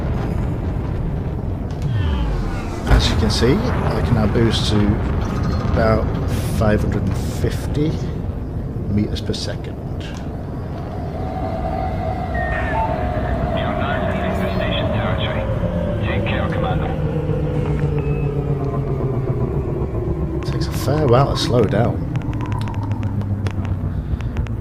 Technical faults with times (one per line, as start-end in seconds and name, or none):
20.43-24.48 train of clicks